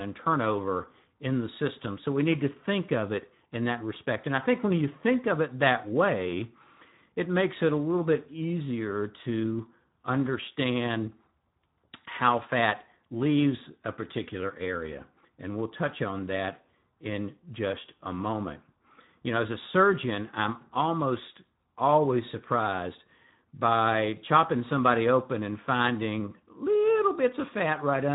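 Throughout the speech, Speex codec damage is plainly audible: a hoarse, noisy CELP sound suggesting roughly 11 kbps, with a spectrogram showing nothing above 3.8 kHz.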